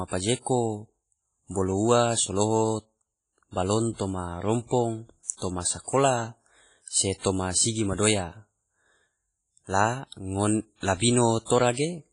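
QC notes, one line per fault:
throughout: WMA compression, likely. Heavy ringing, washy damage with hiss breathing along with the speech. Nothing above 10.4 kHz. This fits a low bitrate near 24 kbps.
5.37–5.42 s, after "toma rompong", and 11.45–11.50 s: pre-echo. A short hiss of about 48 to 49 ms precedes each attack, softening it. Block-wide quantisation noise fills the quiet gap before.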